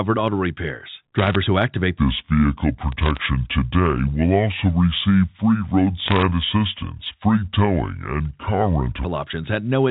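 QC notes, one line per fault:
1.18–1.35 s, 2.92–3.22 s, 6.08–6.22 s: bit errors on a digital phone line. Sharp ticks and crackle ride over the speech, first just after "auto repairs". Each flipped bit corrupts one G.711 sample.
1.98–9.04 s: section at the wrong speed. After "who activate", playback runs at 0.674 times normal speed. Speech drops about seven semitones and drags, likely from a clock mismatch.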